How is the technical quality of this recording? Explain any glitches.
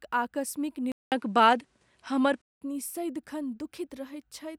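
The recording has one clear glitch: a stretch where the input quality drops. From 0.92 s to 2.62 s, after a 0.2 s silence, the speech turns duller, with nothing above 11.4 kHz, a faint new noise floor and a small level shift, before clearing again. That pattern fits an input switched to a poorer device, likely a different microphone or headset call profile with narrower bandwidth and its own gain.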